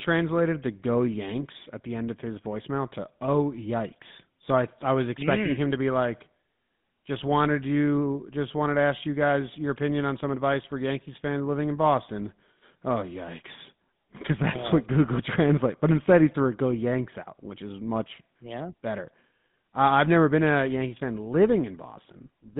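Speech encoded throughout with the GSM full-rate codec, at a rate that fits 13 kbps, confined to a band of about 150 Hz to 3.6 kHz. Its pulse-driven vocal-tract model leaves a plainly audible buzzy, gravelly roughness on the voice, with muffled highs.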